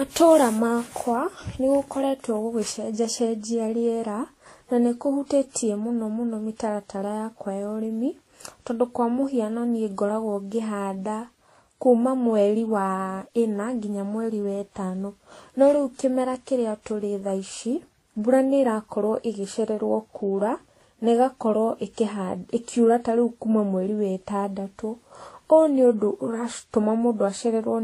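Throughout the speech, two different kinds of compression smearing sit on top of each other, and nothing is heard above 14.2 kHz, which points to likely transcoding between lossy codecs, fitting roughly 33 kbit/s Vorbis re-encoded as 48 kbit/s WMA. Unlike a single low-bitrate encode, the artefacts come from two distinct textures heard together.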